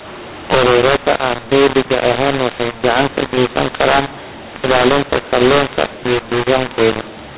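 From start to finish the speech suffers from mu-law and A-law mixed up: mu-law telephone audio is decoded as A-law, scrambling sample levels. Unlike faint G.711 quantisation noise tracking the signal, the quietest samples jump well above silence, so pauses fill with noise.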